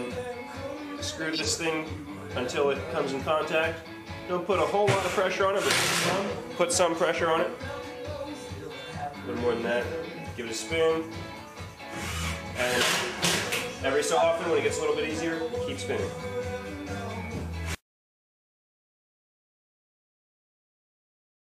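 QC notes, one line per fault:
1.33–1.47 s, 12.29–12.34 s, 14.15–14.25 s: corrupt frame decoded. Damaged frames were decoded anyway, putting energy at the wrong frequencies. Each is heard as a blip or noise burst peaking at about -15, -25 and -10 dBFS.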